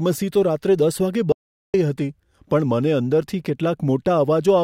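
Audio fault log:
1.32–1.74 s, audio dropout to silence. The speech cuts off abruptly at 1.32 s and returns in mid-flow at 1.74 s. The gap lasts about 0.42 s and is dead digital silence, with no room tone underneath. That points to the input being lost while the recorder kept writing silence, likely from a momentary disconnection or mute. Whatever was spoken in that stretch is gone, not just quieter.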